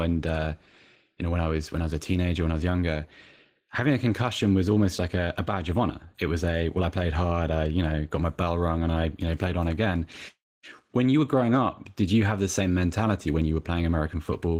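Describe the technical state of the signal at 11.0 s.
Opus voice compression is active at 11.0 s, as it is across the whole clip. The sound points to hybrid coding at roughly 16 kbps: linear prediction below 8 kHz and a transform layer above, with coarsely coded excitation that makes the speech plainly hoarse and slightly robotic.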